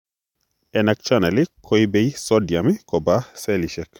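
A speech recording, with nothing technically wrong with it.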